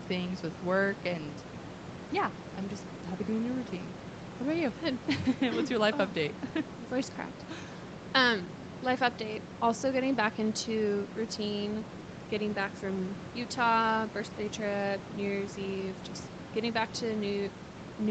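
No technical faults can be heard in this speech recording.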